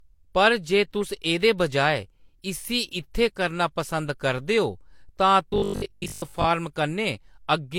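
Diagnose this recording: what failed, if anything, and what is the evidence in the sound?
The codec stage shows stacked damage across the whole speech clip, most likely transcoding between lossy codecs. Nothing survives above the lowest cut-off in the chain, so a spectrogram shows a hard ceiling there. Beneath it, two kinds of artefact sit together: smeared, warbly high-band texture suggesting spectral band replication, plus pre-echo and swirling quantisation noise. That combination fits an HE-AAC encode near 48 kbit/s re-encoded to Vorbis near 66 kbit/s. The second encoder spent its bits preserving the first one's errors.

From 5.50 to 6.48 s the speech turns into a rigid metallic buzz at 50 Hz, the robotic sound from repeated short buffers. It still loosely follows the syllables. This points to the driver or buffer stage, likely starved playback that filled gaps by looping the last block. 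A 50 Hz period fits a 20 ms buffer. Roughly half the audio in that stretch is repeats. On a spectrogram this appears as evenly spaced 50 Hz harmonic lines, and a waveform zoom shows identical 20 ms cycles.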